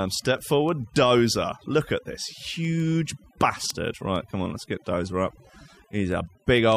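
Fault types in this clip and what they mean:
Overdone noise removal: A noise reduction setting far too strong affects the whole clip. It pushes frequency bands down whenever they sit near its noise estimate, and quiet parts of the speech vanish too. The background drops and breaks up into twinkling specks.
Word clock ticks: The receiving device runs on its own clock, unlocked from the sender's. Each time the clocks slip, one sample is dropped or repeated. Sharp ticks of uneven strength recur about every 0.15 s from 0.23 to 6.72 s, which suggests a mismatch near 150 ppm.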